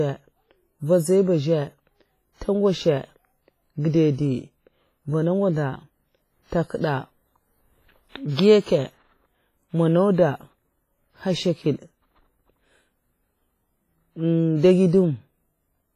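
From start to finish the speech has a ringing, washy smear, with hiss breathing along with each phrase and nothing above 15.5 kHz. That's likely WMA compression, heavy damage fitting roughly 24 kbps, where long transform blocks spread quantisation noise and weak detail gets zeroed.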